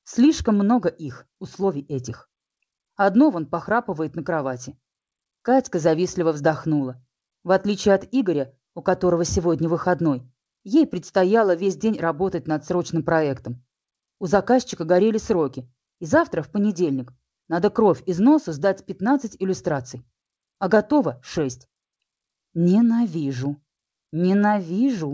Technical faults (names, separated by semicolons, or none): clock drift between sender and receiver; repeated timing corrections